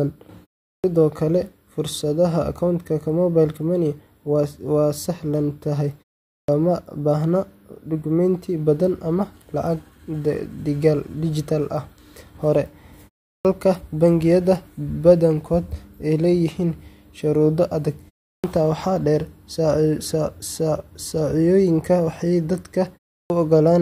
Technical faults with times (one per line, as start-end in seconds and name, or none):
0.75-0.84 clipped start after a pause
6.40-6.48 clipped start after a pause
13.36-13.45 clipped start after a pause
18.34-18.44 clipped start after a pause
23.21-23.30 clipped start after a pause